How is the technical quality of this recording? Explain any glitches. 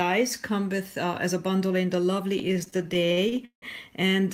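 The recording has one clear glitch, a burst of repeated stalls (stutter) between 2.39 and 3.65 s. Across that stretch the sound halts fifteen times, each time holding or repeating its last moment, and the longest hold lasts 171 ms and audibly fades. Together these fills take up 387 ms, about a third of the span, so the sound drags and jerks forward. Packets were reaching the receiver late, draining its jitter buffer repeatedly, and the receiver filled each wait with the preceding sound. Nothing is lost.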